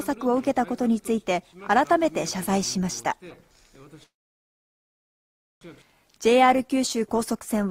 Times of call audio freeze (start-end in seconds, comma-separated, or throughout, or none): 4.03-5.64